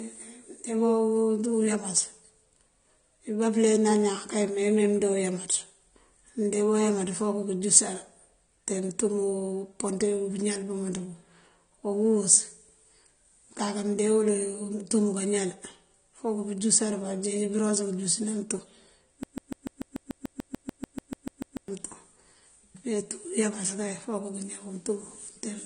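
Throughout the clip the speech sounds dull and smeared, with nothing above 9.7 kHz and a plainly audible warbling, fizzy texture on sibilants. This points to AAC compression, likely AAC-LC at around 32 kbps, where coarse quantisation thins the spectrum and lowers the cut-off.

From 19.23 s to 21.68 s a broken-record loop takes over. A 146 ms fragment repeats back to back 17 times, likely because the stream or player stalled and kept resending its last buffered piece. The audio that belonged in that span is lost.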